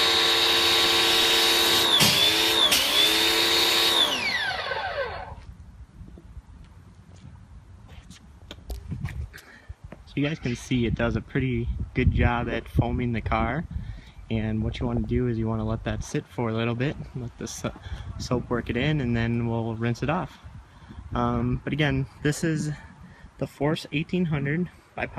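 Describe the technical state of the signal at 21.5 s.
At 21.5 s the audio carries the same damage heard across the whole clip, most likely MP2 compression at a bitrate around 80 kbps. The encoder divides the spectrum into 32 sub-bands and runs short of bits, so upper bands drop out and flicker back while the remaining ones are coarsely quantised. The result is plainly audible: a dull top with a gurgling, granular texture, unlike a plain low-pass filter's steady, clean roll-off.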